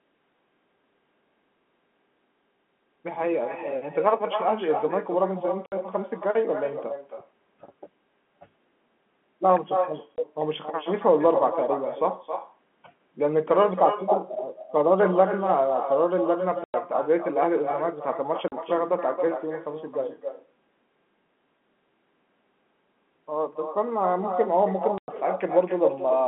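From the start of the speech to its end, every phrase is shadowed by a weaker copy arriving roughly 300 ms later, about 7 dB below the original. This is echo with no canceller: the far end's loudspeaker feeds its microphone and nothing subtracts the returning signal, so the talker's own voice comes back after the network round trip. Because the delay is that long, it is heard as a distinct repeat rather than as room reverberation.

Five holes of packet loss filled with silence break the speech: 5.66 to 5.72 s (60 ms), 10.16 to 10.18 s (20 ms), 16.64 to 16.74 s (100 ms), 18.48 to 18.52 s (40 ms) and 24.98 to 25.08 s (100 ms). Every gap is a whole multiple of 20 ms, which fits a 20 ms packet length. The audio cuts to dead silence with hard edges. That sets these apart from concealed loss, which would smear or repeat sound across the gap, and from the echo, which adds sound rather than removing it.

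The narrow telephone band of the G.711 coding can be heard throughout.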